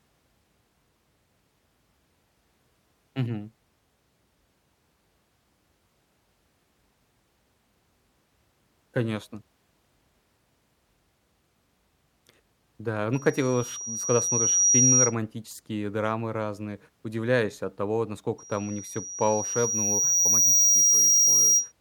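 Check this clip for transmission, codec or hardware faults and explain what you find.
One fault type recurs: loudspeaker feedback squeal, at 13.13–15.15 s and 18.38–21.72 s. Microphone-to-speaker loop gain exceeds unity at 5.7 kHz, so a pure tone swells over a second or two to roughly 10 dB above the speech.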